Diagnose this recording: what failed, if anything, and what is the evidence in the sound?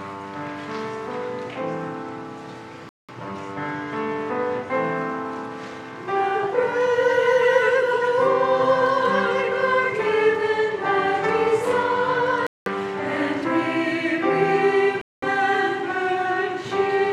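At the wireless playback link, abrupt silent holes at 2.89–3.10, 12.47–12.70 and 15.01–15.26 s resume mid-sound, as if the audio played on. A stalling buffer underrun would instead resume where it stopped. This is likely a Bluetooth dropout of late packets.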